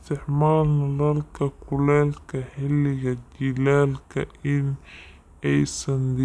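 From start to finish the speech runs slow and deep, a classic wrong sample rate fault. Speed and pitch drop together, to about 0.69 times normal and roughly six and a half semitones down, which fits 32 kHz material being played back at 22 kHz without conversion.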